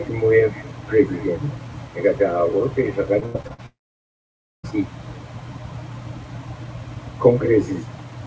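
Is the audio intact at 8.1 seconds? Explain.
Yes, the audio is intact at 8.1 seconds, with the sound passing cleanly through the call codec path, whose band stops at about 8 kHz.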